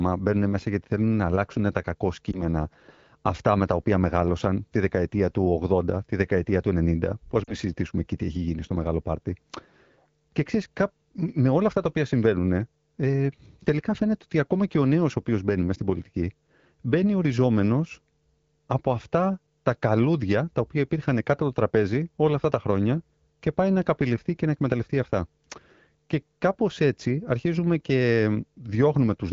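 A brief dip or warble at 2.31–2.42 s, just after "να αλλάξουν τα κακό", then a longer patched-over gap at 7.44–7.54 s, just before "συζητήσουμε εκεί τι έχει". These are lost AMR speech frames. The decoder filled about 20 ms, then about 40 ms (fitting one, then two corrupted frames), by reusing the last good pitch and vocal tract settings at falling gain.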